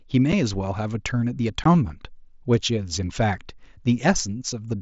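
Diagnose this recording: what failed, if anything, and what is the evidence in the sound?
Unconcealed Bluetooth headset packet loss on the wireless link between headset and phone: speech packets went missing and nothing filled the gaps. The speech has abrupt dropouts at 0.32 s and 1.64 s, about 7.5 ms and 15 ms long, which fits one and two lost mSBC frames, with speech reaching up to 8 kHz around them.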